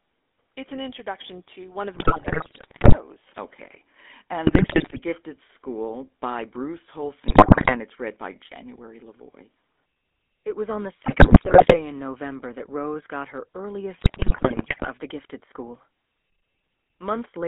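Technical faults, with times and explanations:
Throughout, GSM full-rate codec: the speech is confined to a telephone band of about 250 Hz to 3.5 kHz and carries a plainly audible buzzy, gravelly roughness, consistent with the 13 kbps full-rate codec. That codec rebuilds each frame from a vocal-tract filter driven by a sparse, regularly spaced pulse excitation that keeps only a third of the samples, so fine detail between pulses is lost and replaced by a coarse, grainy texture.
1.94–2.96 s, 4.46–5.00 s, 7.28–7.76 s, 11.02–11.77 s and 13.98–14.87 s, GSM bit errors: the speech breaks into squawks, pops and gargling, first just after "an introduction to one", then after "was on the", and finally between "got her" and "the gifted school". Corrupted bits reach the decoder and scramble its filter, pitch and gain parameters, so frames come out with warped spectra or sudden level jumps. The density suggests an error rate of roughly 5 to 7 percent.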